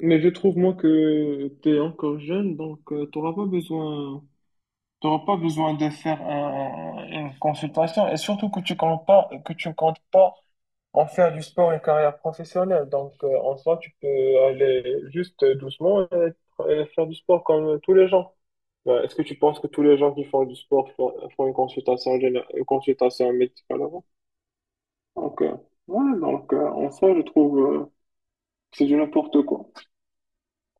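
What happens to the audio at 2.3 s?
Channels drifting apart affects 2.3 s, as it does the whole clip. The two channels run on clocks roughly 100 ppm apart, so their offset slowly grows toward about 3 ms. Summed to mono, comb notches sweep gradually, heard as slow flanging.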